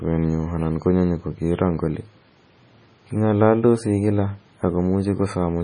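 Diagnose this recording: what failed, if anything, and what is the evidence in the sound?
MP3 compression runs through the whole clip, a codec-stage fault: nothing remains above 10.2 kHz, and the speech sounds heavily watery and swirly, with smeared attacks, which fits roughly 24 kbps. The likely cause is a bit-starved encoder cutting treble and zeroing weak frequency lines frame by frame.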